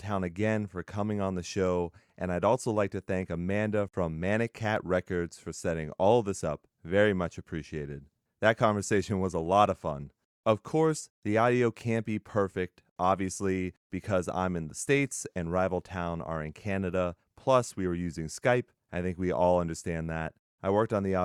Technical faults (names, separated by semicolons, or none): clock drift buffer slips